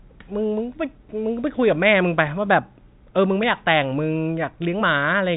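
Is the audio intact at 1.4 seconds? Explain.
Yes, the audio is intact at 1.4 seconds, with nothing there beyond the ordinary narrow band of G.711 telephone coding, which passes nothing above 3.8 kHz.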